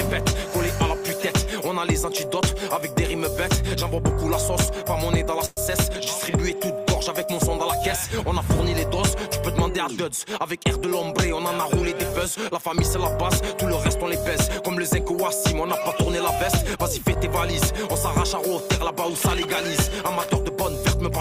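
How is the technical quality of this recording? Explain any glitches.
One glitch stands out: a call audio freeze from 5.45 to 5.59 s. For 115 ms the last sound is held as a fading buzz or hiss, likely because delayed packets left the jitter buffer empty. The audio then resumes where it stopped, 115 ms late and with nothing lost. A spectrogram shows smeared horizontal bands thinning out, and the waveform shows a short decaying repetitive stretch with no flat silence.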